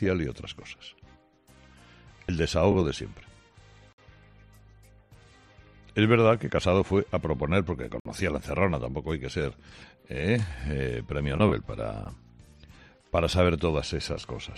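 At 3.93 to 3.98 s, 8.00 to 8.05 s and 12.05 s the sound drops out abruptly, each a gap between stream segments. The first two holes last about 55 ms and the third about 7.5 ms, and they recur roughly every 4 s, matching 4 s segment boundaries. The time stamps of adjacent segments leave a small gap that playback fills with silence, so nothing is lost, but each hole has hard edges.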